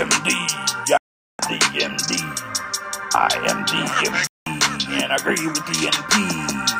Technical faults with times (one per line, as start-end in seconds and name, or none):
0.97-1.39 digital broadcast dropout
4.27-4.47 digital broadcast dropout